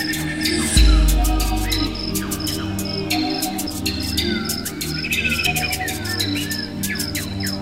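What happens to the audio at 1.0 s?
Nothing goes wrong at 1.0 s; the audio carries on intact through that moment with no audible fault.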